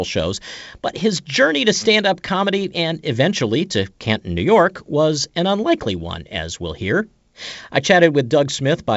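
Nothing here needs fixing: it's a speech recording carried over G.722 wideband telephone coding at 64 kbit/s, with the top end stopping around 7.7 kHz as that coding would have it, and no technical faults turn up anywhere in it.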